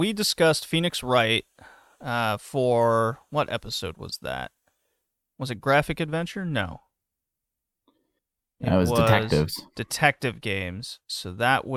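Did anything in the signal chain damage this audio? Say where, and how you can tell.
No, nothing in the signal chain damaged this speech.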